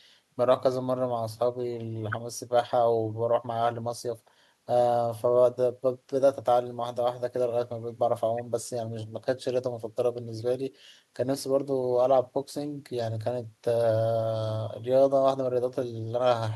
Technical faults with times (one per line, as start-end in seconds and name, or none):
none